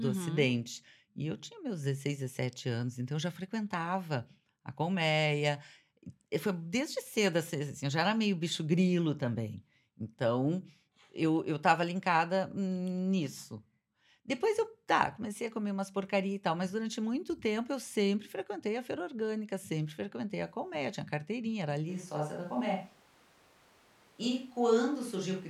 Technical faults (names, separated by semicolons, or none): sample clock jitter; switch to a distant microphone